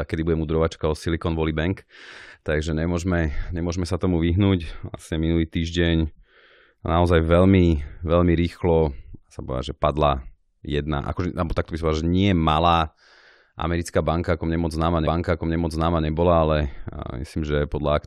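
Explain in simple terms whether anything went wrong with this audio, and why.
Something went wrong in playback: a stream segment repeated, meaning the player queued the same piece of the stream twice. Right after "ako mne moc známa", from 15.06 to 16.06 s, about one second of speech plays again, with a small blip at the jump back.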